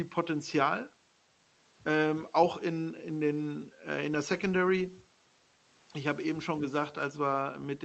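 No technical faults occur at any point in the clip.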